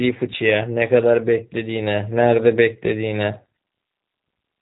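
From start to finish the speech carries plainly audible G.729 codec damage, and the character of it fits the G.729A variant at 8 kbit/s. Each short frame is resynthesised from a vocal tract filter, a pitch predictor and a handful of pulses, which makes the voice slightly rough and synthetic. On a spectrogram the energy stops sharply near 3.8 kHz, harmonics look smeared, and the waveform lacks fine detail.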